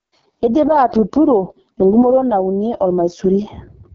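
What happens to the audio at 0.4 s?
At 0.4 s the speech sounds rough and raspy, with a buzzy, grainy edge and nothing above about 7.1 kHz. This is AMR wideband (HD Voice) codec damage that runs through the whole clip. The heavy roughness points to the lowest 6.6 kbit/s rate, where the pulse-driven vocal tract model is starved of bits.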